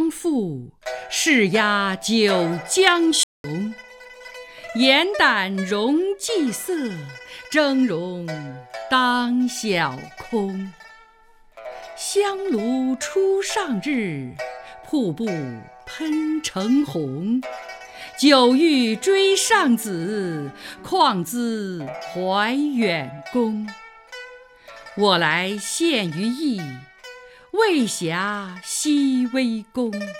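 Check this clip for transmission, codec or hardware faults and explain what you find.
One fault turns up: a playback stall. From 3.23 s to 3.44 s, about 208 ms, the sound cuts out cleanly mid-flow and then carries on. The player likely ran short of buffered data or was blocked. Packet-loss concealment would give brief, smeared fragments. This is one clear, sustained silence.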